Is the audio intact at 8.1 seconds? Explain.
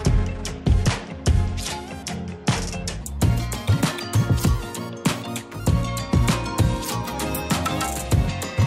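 Yes, the audio is intact at 8.1 seconds, with no fault at that moment.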